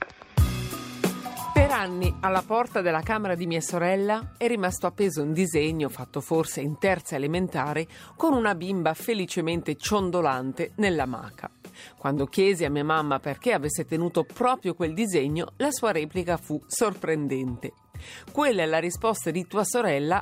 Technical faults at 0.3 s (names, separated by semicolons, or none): none